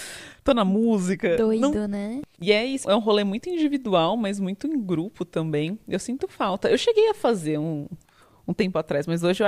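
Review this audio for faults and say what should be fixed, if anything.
Nothing to fix: no faults found anywhere in this speech recording.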